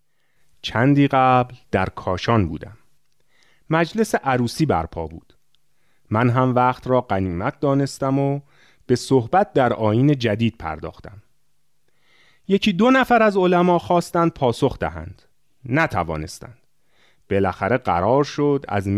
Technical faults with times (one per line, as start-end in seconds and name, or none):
none